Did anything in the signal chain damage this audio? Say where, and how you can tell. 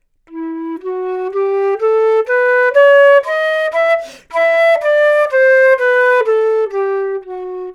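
No, nothing in the signal chain damaged this audio.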